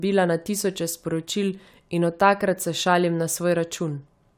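A short recording of speech, with nothing technically wrong to report. No dropouts, distortion or other faults can be heard at any point in it.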